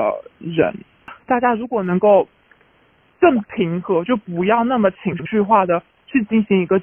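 From 5.12 to 5.27 s, frames out of order: two adjacent 64 ms blocks, each pointing to about three frames, were decoded swapped, giving a brief garbled flutter.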